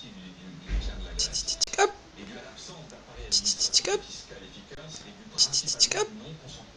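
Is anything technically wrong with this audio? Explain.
Yes. There are two underruns with held sample, at 1.64 to 1.67 s (35 ms) and 4.75 to 4.77 s (23 ms, which fits a 1024-sample buffer). Each time the output buffer emptied and the converter held its last value, so the sound flattens abruptly. It then restarts with roughly 40 ms and 20 ms of audio skipped.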